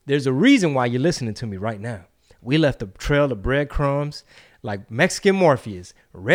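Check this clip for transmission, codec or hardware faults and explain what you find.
No faults heard.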